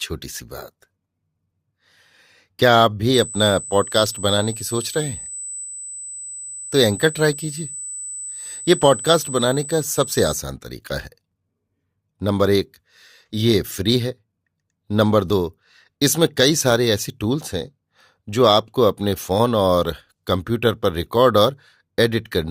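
USB whine runs from 3.14 to 10.39 s: current drawn in 125-microsecond bus microframes leaks into the audio, giving a steady 8 kHz tone roughly 15 dB below the speech. Overlap between stream segments causes tiny skips at 5.34, 7.33, 9.32, 11.32 and 15.30 s, where overlapping 2-second segments were trimmed, dropping a few milliseconds and jumping the waveform.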